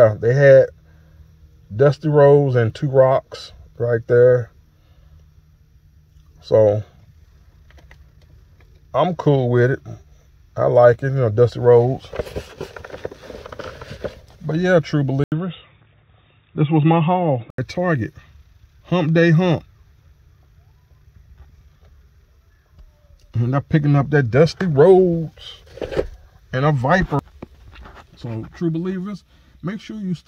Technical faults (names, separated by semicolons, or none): input switched to a poorer device